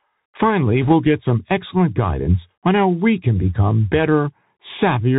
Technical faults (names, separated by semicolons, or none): Bluetooth CVSD headset codec; bit errors on a Bluetooth voice link